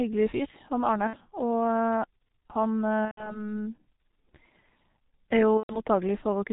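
G.723.1 codec damage runs through the whole speech clip. The heavy coding at what sounds like about 6 kbit/s removes everything above 4 kHz and tracks the voice only coarsely. The result is muffled, hoarse speech with smeared consonants.

VoIP packet loss concealed by the speech codec occurs at 1.07–1.18 s, 3.05–3.46 s and 5.57–5.81 s. The decoder fills the missing frames by repeating its last pitch and filter at falling gain. This stretches the sound into a fading buzz that stays weak for a while afterwards. The gaps fit two, then four, then four lost 30 ms frames.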